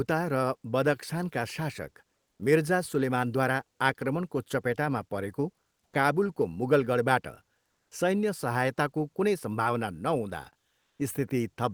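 Speech, with one fault near the end. From 10.81 to 10.99 s, about 180 ms, the real background is replaced by comfort noise. The room sound, already about 45 dB below the loudest passages, turns into a steady, featureless hiss, about 5 dB quieter. The likely cause is discontinuous transmission in an Opus-type codec. The sender goes quiet when no speech is detected, and the receiver fills the gap with synthetic noise.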